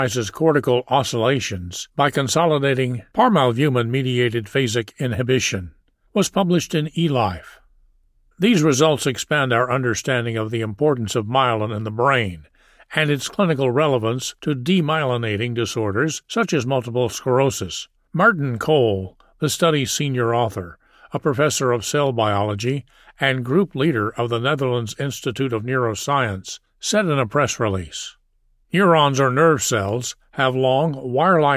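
No technical faults can be heard anywhere in the recording. Nothing in it stands out as needing a time or a description.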